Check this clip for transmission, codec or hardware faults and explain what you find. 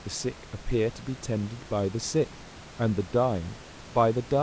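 No transmission, codec or hardware faults can be heard in this speech. The call path sounds as expected for a G.722 link at 64 kbps, with nothing above 8 kHz, and the room's background noise sits about 23 dB below the speech.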